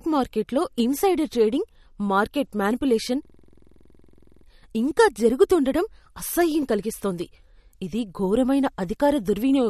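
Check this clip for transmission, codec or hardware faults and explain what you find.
Two faults are audible: compression damage through the whole clip and a hang loop in the middle.

MP3 compression: The encoder likely ran short of bits, consistent with a low bitrate around 48 kbps. It discarded everything above 13.3 kHz and dropped weaker frequency detail unevenly from frame to frame. The result is plainly audible. The speech has a dull top end, and the sibilants and consonant onsets have a watery, swirling quality with smeared attacks.

System hang loop: From 3.25 to 4.46 s, the computer or audio driver stalled while the sound hardware kept replaying its buffer. A 46 ms slice of audio repeats about two dozen times, which fits a 2048-sample buffer. At 21.5 repeats per second, the sound becomes a fast, rattling stutter on one frozen fragment before playback resumes, with little or nothing seemingly lost.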